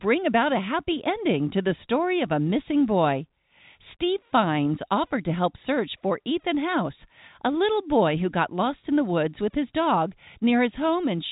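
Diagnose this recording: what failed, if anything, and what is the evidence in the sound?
Nothing here has failed; the speech just has the ordinary narrow band of G.711 telephone coding, with nothing above 3.8 kHz, which is exactly what a normal phone line sounds like.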